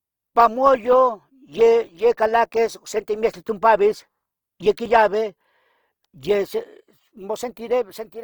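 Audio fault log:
throughout Opus compression: the speech was likely coded with Opus in its music (CELT) mode at a low rate, the grain fitting about 24 kbps. Short of bits, bands get filled by folding or noise, so it sounds plainly rough and grainy while still reaching 20.2 kHz.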